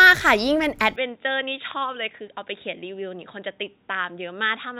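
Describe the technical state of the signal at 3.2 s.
At 3.2 s the speech is band-limited to 3.8 kHz and about 5 dB quieter, with faint new noise, from 0.96 s onward: likely an input switched to a poorer device.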